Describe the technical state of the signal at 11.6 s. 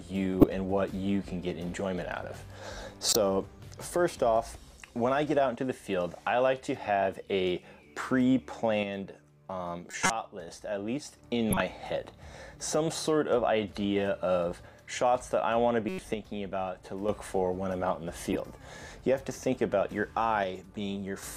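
At 11.6 s the signal carries a corrupt frame decoded fault, running from 11.51 to 11.60 s, about 0.1 s, a span that fits roughly three damaged compressed frames. Flipped bits left the decoder misreading gains and codes, so energy lands at wrong frequencies, heard as a brief chirpy burst of noise peaking around -10 dBFS. On a spectrogram it shows as a sharp, blocky smear of misplaced energy; the waveform shows a short, abrupt spike.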